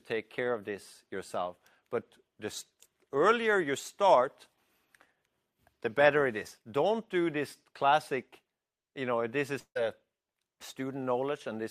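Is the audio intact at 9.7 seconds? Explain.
No. From 9.59 to 9.77 s the clip has what is likely a long network dropout, in which incoming audio stopped arriving and the receiver had to cover the gap. The last sound is extended as a fading buzz or hiss for about 158 ms, the final 70 ms or so settling into silence. When the signal returns at 9.77 s, about 160 ms of the original is missing, so the audio resumes further along with that stretch lost.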